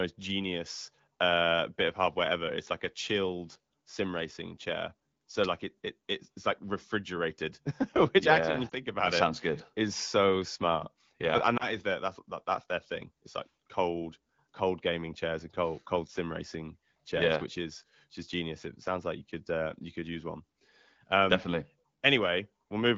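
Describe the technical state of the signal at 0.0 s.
At 0.0 s the signal is intact, with no fault present at that moment.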